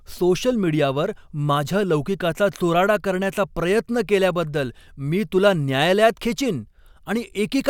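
No technical faults can be heard anywhere in the speech.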